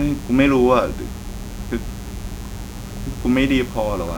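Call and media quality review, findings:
Mains buzz, present throughout the speech. Steady, raspy buzz sitting roughly 20 dB under the talker. Fundamental at 60 Hz. Probable source: dimmer, rectifier or unshielded cable on the capture side. Mechanism: sharp switching spikes enter twice per 60 Hz cycle. Harmonics stack up into the kilohertz range, hence the rasp rather than a pure hum.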